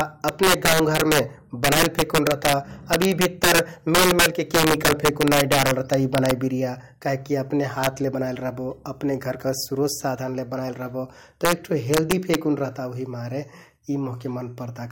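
Gain pushed the speech past the integer limit, so peaks wrapped to the opposite sign instead of clipping. The integer overflow cracks violently from 0.01 to 1.19 s, 1.64 to 2.54 s, 2.93 to 3.59 s and 3.95 to 6.31 s, overdriven by about 6 to 7 dB. It returns more briefly at about 2 to 3 dB at 7.84 s between "बिरिया काहिककि अपने" and "ले बनाइल", then at 11.45 to 11.53 s and 11.94 to 12.35 s.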